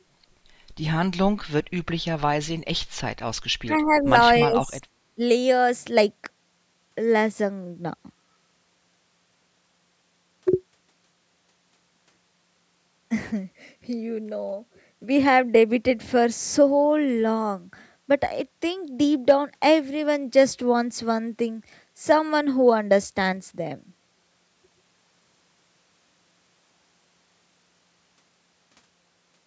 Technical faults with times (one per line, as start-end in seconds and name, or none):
3.64-4.11 speech suppressed in double talk
3.77-3.99 echo leak
4.44-4.87 speech suppressed in double talk
5.15-5.21 speech suppressed in double talk